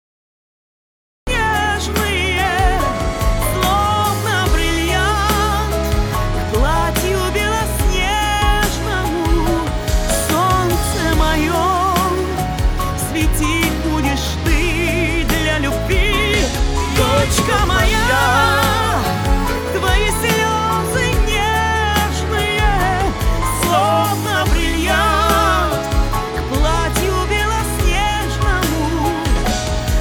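The capture began late, a cut-off start, so the first 1.27 s hold nothing but digital silence and the audio switches on abruptly at 1.27 s. Because recording picked up partway through a sound already in progress, there is no natural attack or fade-in; the material enters at full level mid-event, as if sliced, with whatever came before that point simply missing from the clip.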